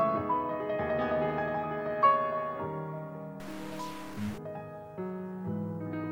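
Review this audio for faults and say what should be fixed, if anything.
Stuck bit, from 3.4 s to 4.38 s: the sound turns harsh and buzzy for this stretch, and any quiet moments inside it fill with a steady noise instead of falling silent. The likely cause is one data bit held fixed by a faulty line or converter. Roughly half the samples are pushed off by that bit's weight, a step of about -40 dBFS, in a pattern that tracks the waveform. Fix this section by replacing it from a clean source. To prevent it, inspect converter connections and run a bit-pattern test on the digital path before recording.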